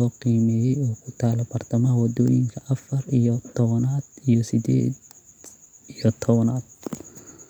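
Speech recording, with no technical faults to report.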